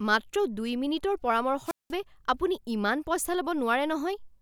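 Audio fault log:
1.64 to 1.94 s, wireless microphone squelch dropout: you get a quick swell of hiss as the radio link fades, then the receiver's squelch slams the output shut for roughly 191 ms of near silence before the speech comes back. The FM signal got too weak for the receiver to trust, so rather than pass a burst of static it muted itself until the carrier recovered. That's why it sounds like a gap, not a crackle.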